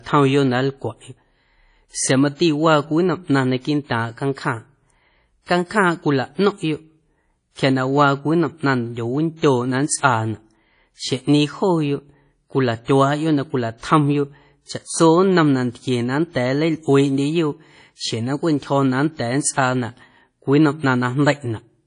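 Speech with plainly audible WMA compression throughout: a ringing, washy quality and hiss that swells with the voice, which fits a low bitrate around 32 kbps, likely from an early WMA encoder. A spectrogram shows nothing above 10.1 kHz and patchy, smeared upper bands.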